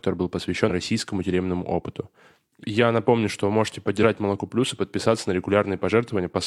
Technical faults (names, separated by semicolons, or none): compressed frames skipped